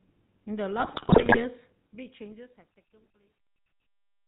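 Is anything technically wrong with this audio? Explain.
Yes. Three faults are audible.

The GSM full-rate codec colours the whole clip. This codec models the vocal tract and drives it with a regular pulse train. It keeps only a thinned-out version of that excitation. Nothing above 4 kHz survives. The speech sounds buzzy and gravelly throughout. The damage is plainly audible, which fits the 13 kbps full-rate coder.

GSM bit errors strike from 0.8 to 1.45 s. Corrupted bits reach the decoder. Bad filter, pitch and gain values then warp the spectrum or inflate the level frame by frame. The speech breaks into squawks, pops and gargling. About 29 codec frames within the span are hit. The density of the damage points to a bit error rate near 5 percent.

Truncation distortion on a fade runs from 1.71 s to the end, at 4.27 s. The speech fades out, from roughly 1.7 s to 4.28 s. But the fade stage keeps too few bits and adds no dither. 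As the level drops, the waveform collapses into a few coarse steps. The grit is worst from 2.55 s onward. This fits an 11-bit stage.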